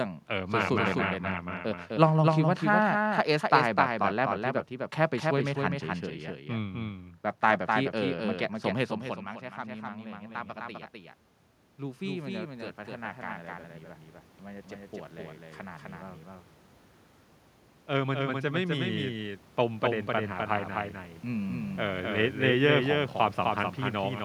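A doubled audio track runs through the whole recording: every stretch of speech is followed by a second, full-band copy roughly 300 ms behind and about 5 dB quieter. The copy carries no decay or room colouring, so it sounds like a distinct slapback echo rather than reverberation. The likely cause is the same signal being picked up a second time through a slower path, or two out-of-step copies held together, and then mixed in with the original.

Automatic gain rising appears from 9.01 to 15.94 s. Around 9.0 s the talker moves away from the microphone, and the input falls by about 18 dB. The automatic gain control judges the signal too quiet and slowly raises its gain by about 11 dB across those seven seconds. The voice and the room noise beneath it swell together as the gain climbs.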